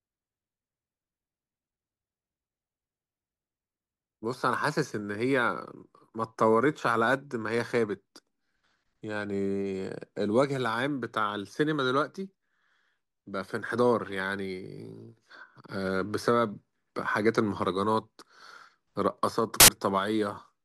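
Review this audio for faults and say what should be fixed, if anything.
At 19.60 to 19.68 s, samples built from the wrong bytes: misaligned byte assembly promotes the low bits to the top of each value, producing a brief burst of loud, harsh broadband noise. Fix this by enforcing correct byte order and sample alignment in the reader, verified against the declared format.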